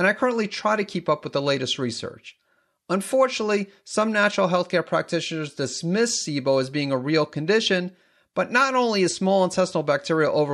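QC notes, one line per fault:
No faults found on this speech take; nothing to log.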